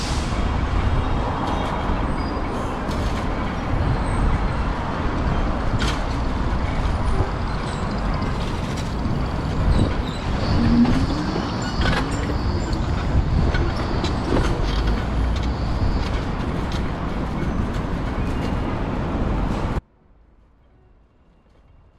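An audio dropout to a faint residue hits at 19.79 s and lasts to the end of the clip. The sound drops abruptly, leaving only a faint trace of the signal roughly 35 dB below its normal level. That residue is what separates it from a clean mute or a deliberate pause, and the sudden step rules out a fade. The likely cause is a lost feed upstream while the downstream path stayed live and leaking.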